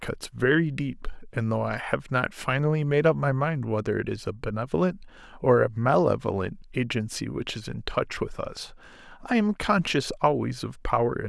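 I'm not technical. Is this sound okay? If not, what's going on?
Yes, this recording sounds fine; nothing is wrong.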